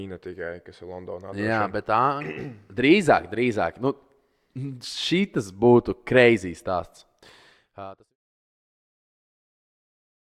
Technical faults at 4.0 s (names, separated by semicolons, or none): none